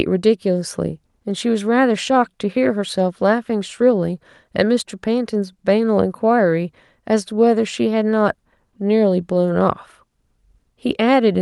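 No technical faults are audible.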